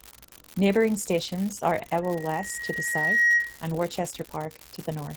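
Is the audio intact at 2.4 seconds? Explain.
No. A loudspeaker feedback squeal covers 2.4 s. It runs from 2.03 to 3.62 s, starting just after "stations are". The microphone hears its own loudspeaker, and the loop gain passes one at 1.9 kHz. That tone swells over roughly a second to a squeal about 10 dB above the speech.

An unreliable data bit is also present at this moment. One marginal data line flips its bit in a random share of samples. Each flip makes an equal-sized spike, so a steady crackling fizz runs under the sound, pauses included.

Opus voice compression is audible here too. The codec runs in hybrid mode, with linear prediction below 8 kHz and a transform layer above. The band stays full, but the excitation is coded coarsely. This makes the speech hoarse and slightly robotic, which fits a bitrate around 16 kbps.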